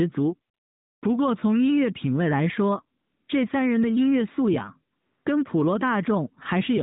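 From 0.54 to 1.02 s, 3.00 to 3.28 s and 4.96 to 5.26 s, AMR comfort noise takes over. With no speech frames sent, the receiver fills each pause with smooth, steady synthetic hiss that switches in and out. Unlike a dropout, these gaps are filled rather than silent.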